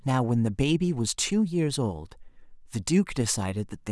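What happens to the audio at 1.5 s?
Nothing goes wrong at 1.5 s; the speech carries on intact through that moment.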